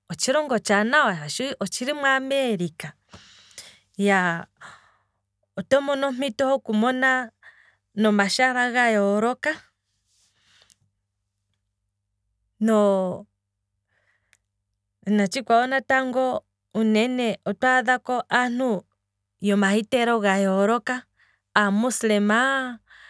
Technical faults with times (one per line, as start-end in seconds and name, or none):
none